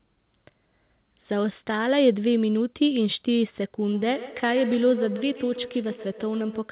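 From 3.87 s to the end of the clip, two devices in the same room are joined to one call, producing feedback echo between two devices. One device's loudspeaker plays what the other's microphone sent, and that microphone captures it again. Neither echo canceller removes sound it did not play itself. Each syllable returns roughly every 150 ms, peaking at about 12 dB below the speech, thin and ringing, and limited to below 4 kHz like the rest of the call audio.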